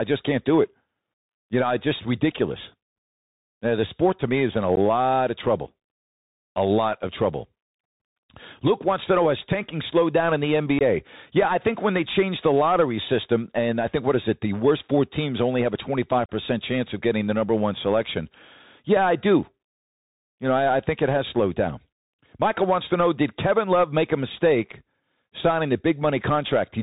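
From the start and for the whole speech clip, the sound carries the Bluetooth CVSD headset codec. The link sends one up-or-down bit per sample and adapts its step size, so nothing above 4 kHz survives. Loud bright sounds outrun the step and distort, s sounds turn scratchy, and a fine granular hiss sits under the speech, which fits a 64 kbps CVSD link. That hiss and the slope distortion set it apart from a plain telephone band-limit, which would be clean inside the band.

There are three cases of unconcealed Bluetooth headset packet loss. At 4.76 s, between "me is in a" and "of trouble", a handful of packets vanish, leaving a 15 ms hole. At 10.79 s, after "slowed down in the", about 19 ms is gone. From 16.26 to 16.29 s, between "teams only have a" and "chance of getting the", a 34 ms gap covers about ten packets. Each hole is filled with silence or an idle pattern and has hard, abrupt edges, and the speech returns briefly quieter. 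Gaps this short and sharp edged, with no smoothing, point to dropped radio packets rather than a fade or a gate.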